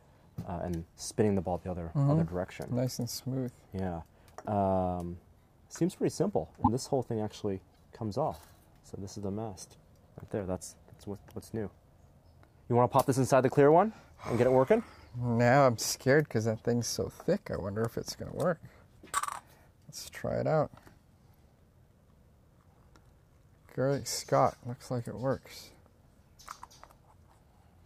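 At 6.62 to 6.68 s and again at 7.72 to 7.76 s the sound skips forward and the next instant comes out brief and garbled. That's likely a broken MP3 bit reservoir: frames went missing, so the following frames, about 26 ms each, decoded from the wrong bytes.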